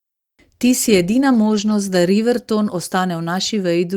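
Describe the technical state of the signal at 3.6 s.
At 3.6 s the speech signal is intact, with no technical fault audible at that moment.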